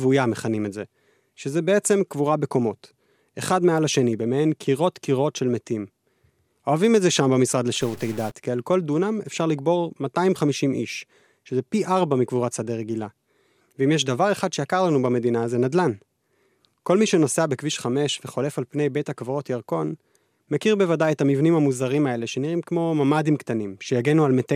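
From 7.81 to 8.31 s, the speech turns harsh and buzzy for half a second. The grit rides on the waveform itself. In the quieter moments it becomes a rough noise floor instead of silence. The likely cause is a stuck bit, one data bit held at a fixed value. Samples that should differ at that bit are pushed off by a step of around -35 dBFS. That error flips with the signal's sign, which fills the pauses with noise.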